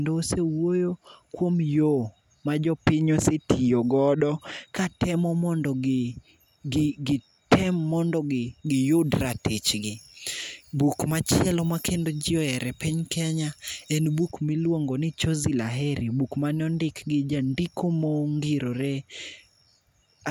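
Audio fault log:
8.67–14.31 s, pre-emphasis left on: from 8.67 s until just before "miluongo ni", the treble rises about 13 dB at 10 kHz relative to 1 kHz, because the recording or transmission boost was never cancelled by its matching de-emphasis. The sound turns thin, bright and hissy on sibilants. The shelf climbs steadily from a few kHz rather than peaking narrowly, which fits a 75 µs FM curve.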